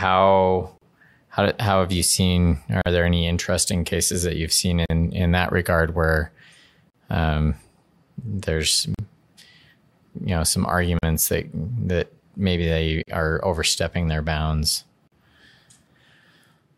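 Gaps at joins of encoded pieces fall at 0.78 s (36 ms, before "how how have you"), then every 2.0 s at 2.82, 4.86 (between "cases that you've seen" and "in that regard where"), 6.90, 8.95, 10.99, 13.03 and 15.08 s (after "are overstepping their bounds"), each 43 ms. Separately encoded two-second pieces were joined with their start-up silence and end padding left in, so the speech drops out abruptly, smeared at the edges, and resumes where it stopped.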